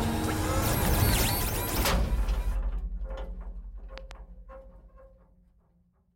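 A voltage step, likely from a plug, switch or static discharge, gets added straight onto the signal, producing a loud pop at 0.85 to 1.11 s and again at 3.98 to 4.13 s. Each time it arrives as a double pop, two sharp thumps in quick succession that sit on top of the sound while it carries on underneath. The first pair peaks roughly 15 dB above the surrounding audio and the second roughly 10 dB above it.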